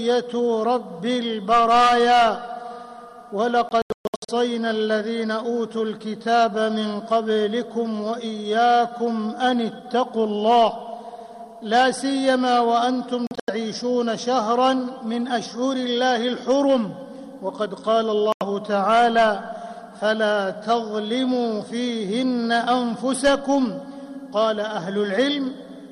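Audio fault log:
3.69–4.30 s, 13.27–13.50 s, 18.32–18.43 s: Bluetooth dropout. The output cuts to silence with abrupt or briefly faded edges, then resumes further on as though playback had continued. The first event loses about 405 ms in several gaps across 0.6 s, with the longest at 128 ms. The second loses about 149 ms across 0.21 s, with the longest at 85 ms. The third is a single 85 ms hole. This is likely wireless packets arriving too late and being discarded.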